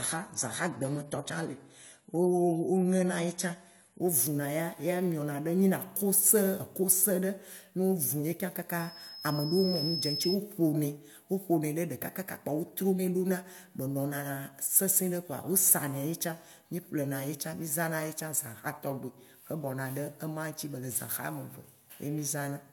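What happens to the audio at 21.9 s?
At 21.9 s the speech plays through intact, with no dropout, click, distortion or other fault.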